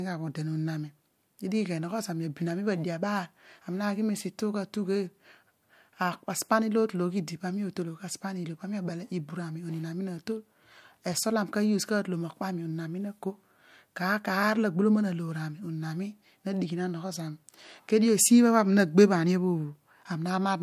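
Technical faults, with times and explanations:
No technical faults are present in this speech recording; the signal holds steady with no dropouts, interruptions or level disturbances to point to.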